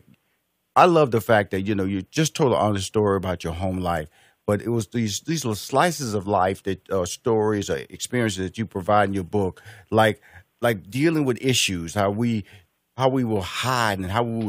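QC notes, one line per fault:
No faults heard anywhere in this speech recording.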